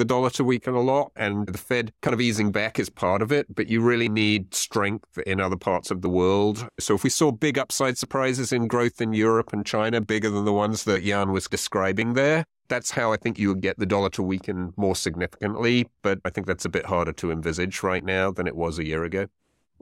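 From 0.10 s to 17.99 s, ending just before "now than it", periodic USB or driver dropouts recur every 1.99 s. A stalled bus or driver skips about ten short chunks of roughly 10 ms each. Their strict spacing, ticking only over speech, sets them apart from random clicks.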